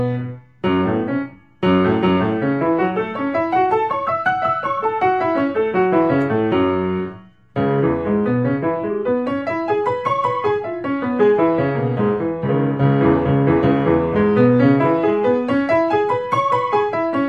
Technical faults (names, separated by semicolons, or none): none